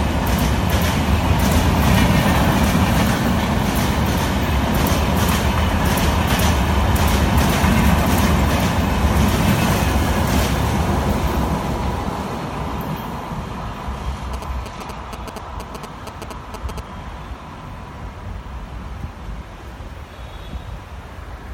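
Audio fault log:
14.34–16.80 s GSM signalling bursts: rectified phone radio pulses give galloping ticks and a 217 Hz buzz, roughly 10 dB down, seen as clustered vertical spectrogram stripes.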